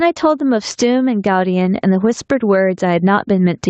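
The input gain on this speech clip was most likely set far too high for the microphone, so a fast limiter or compressor clamps down on every loud syllable throughout. The result is gain pumping, with the level swinging by around 10 dB. Loud and quiet passages sit unnaturally close together, giving a squashed sound. Above 8 kHz, on the call path, nothing remains, which fits Opus at about 20 kbps.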